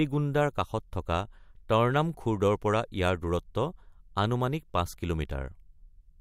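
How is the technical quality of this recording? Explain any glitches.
The technical quality of this recording is good, with no glitches to explain.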